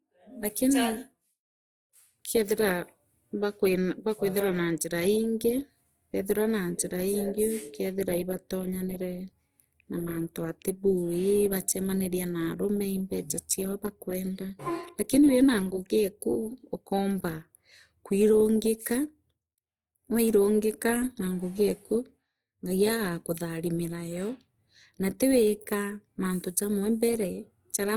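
Throughout the recording, the speech has most likely passed through Opus compression in its music-style CELT mode, at a rate that fits around 24 kbps. With too few bits for every band, the encoder keeps each band's energy but fills the detail with folded copies of lower bands or with noise. The bandwidth still reaches about 20.2 kHz, but the damage is plainly audible: tonal parts of the sound turn grainy, rough and noisy rather than clean.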